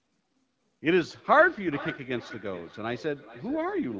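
From 1.25 s to the end there's feedback echo between two devices: a second device in the room replays the call and its mic sends it back. Speech returns roughly every 0.4 s, thinner and ringier each pass, peaking about 16 dB below the speech.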